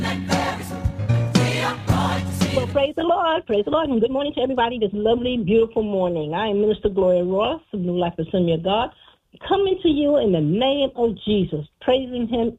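From the start to 4.94 s the sound runs rushed, at roughly 1.56 times normal pace, while its pitch stays put. This is a time-stretched section, likely produced by software squeezing the passage to fit a shorter length by dropping short pieces.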